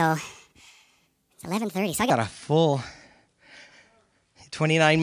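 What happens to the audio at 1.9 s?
At 1.9 s the speech is still inside a wrong sample rate section running from 0.0 to 2.10 s. Playback runs 1.45 times too fast without conversion, which fits 22 kHz material played at 32 kHz, so the speech sounds hurried and about 6.5 semitones high.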